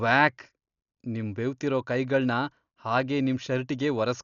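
Throughout, the speech sounds dull and stops at 6.9 kHz, with rough, fluttering noise. It is likely heavy Dolby Digital compression, fitting a bitrate near 48 kbps.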